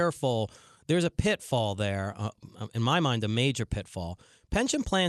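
Nothing stood out on listening to this speech, which comes through an Opus call path with its top end limited to about 12 kHz.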